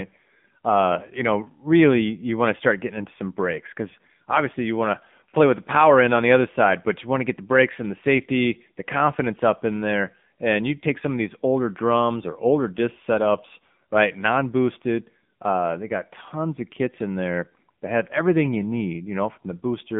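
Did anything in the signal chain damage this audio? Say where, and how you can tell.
Yes, the codec stage: AMR narrowband mobile codec throughout. Everything above 3.7 kHz is gone, and the low-bit pulse model leaves the speech audibly buzzy, which fits roughly a 7.4 kbps mode.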